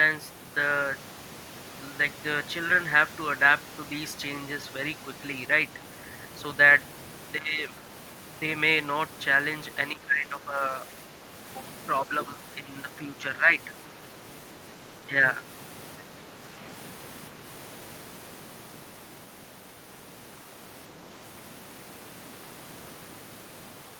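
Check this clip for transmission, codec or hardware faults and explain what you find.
One fault recurs: speech suppressed in double talk, at 7.37–7.62, 9.92–11.31, 12.56–13.48, 15.02–15.41 and 16.02–16.55 s. The speech dips by up to about 15 dB, less in later events. The likely cause is an echo canceller mistaking the talker for echo and turning it down.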